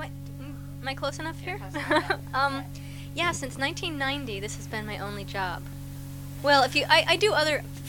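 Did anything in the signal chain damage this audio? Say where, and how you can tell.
Yes, at the driver or USB buffer stage: periodic USB or driver dropouts, where something blocks the audio path about once every 1.024 s. From 4.71 s to 7.77 s, about four brief gaps of a couple of milliseconds are filled with silence, heard as evenly spaced ticks.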